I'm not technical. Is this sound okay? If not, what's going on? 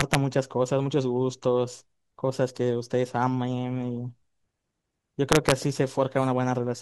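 No. Integer overflow hits at 0.01 to 0.15 s and again at 5.32 to 5.52 s. The loudest moments of the speech exceed the biggest number the system can store, so instead of stopping there they flip to the opposite extreme, producing harsh cracks.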